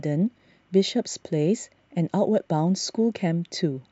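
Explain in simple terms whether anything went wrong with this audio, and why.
Between 0.36 and 0.40 s the speech has chunks out of order. One 20 ms piece of audio arrived one chunk late and played after the piece meant to follow it. No audio is missing, but the swap creates three abrupt joins, heard as a brief jumbled moment.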